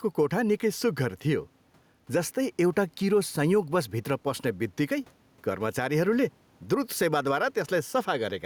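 Speech with gain pumping throughout. The room noise sits about 39 dB below the speech, and the gain swings roughly 5 dB. Likely cause: input gain set too high, with a fast limiter clamping down.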